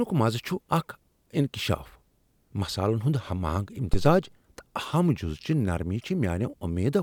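At 3.94 s a phantom power thump appears: a supply switched on or off on a live input sends a step through the coupling capacitors, giving a deep thump peaking near about -11 dBFS. It decays within roughly 72 ms and is over by 4.26 s, showing as a low-frequency vertical smear on the spectrogram and a large lopsided swing on the waveform.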